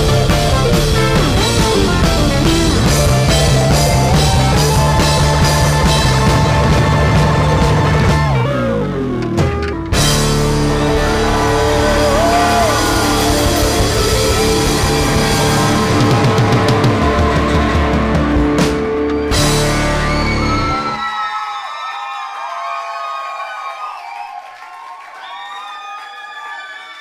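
From 8.46 to 9.73 s, a section plays at the wrong speed. It runs 1.23 times too fast. Pitch rises with it, by about four semitones, so the sound turns high and hurried. The likely cause is an editor or player using the wrong clock.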